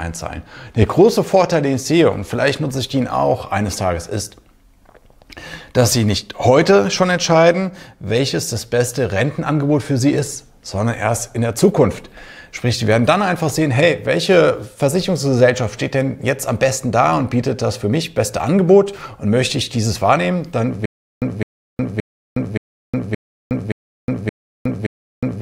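From 20.86 s to the end, a stutter with silent gaps: a 209 ms burst repeats every 573 ms with 364 ms of digital silence between, likely a stalled stream.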